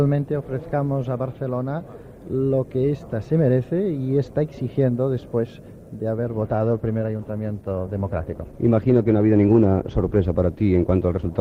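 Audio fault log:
6.48–11.40 s, adaptive stream at a lower bitrate: playback switched to a leaner version, so codec artefacts suddenly rise with no gap, which fits a drop from 64 to 16 kbit/s Opus. The waveform stays continuous.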